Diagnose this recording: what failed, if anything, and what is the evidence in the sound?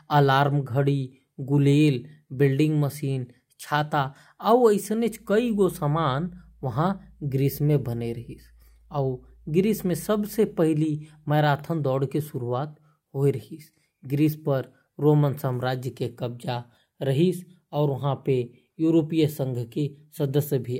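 No fault can be heard.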